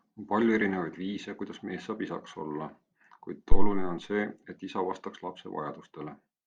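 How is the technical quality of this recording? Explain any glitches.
One fault mars the speech. A phantom power thump runs from 3.52 to 3.87 s. A supply switched on or off on the live input, and the voltage step passed through the coupling capacitors. It sounds as a deep thump peaking near about -4 dBFS, decaying over roughly 79 ms.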